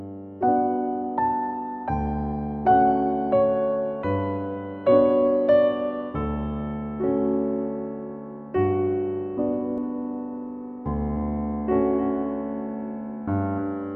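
A second capture path or an out-of-step edit has likely mixed the same audio in twice, producing a doubled audio track from 9.78 s to the end. A full-band copy trails the original by roughly a third of a second, sitting around 10 dB lower. It carries no decay or room colour, so it reads as a flat, detached repeat rather than an echo, and it switches on abruptly at 9.78 s.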